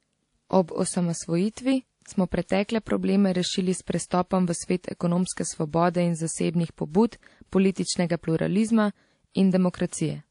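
Throughout the speech, the audio has most likely been passed through one lossy codec and then re-encoded by another, a case of transcoding between lossy codecs. The character points to a low-rate MP3 near 40 kbit/s followed by WMA near 64 kbit/s. Nothing is left above 10.6 kHz, so the top end sounds dull. The second encoder spends bits on the first one's artefacts and adds its own, so the different artefacts are heard together on the speech.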